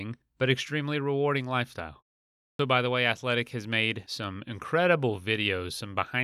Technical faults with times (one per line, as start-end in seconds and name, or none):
2.41-2.59 clipped start after a pause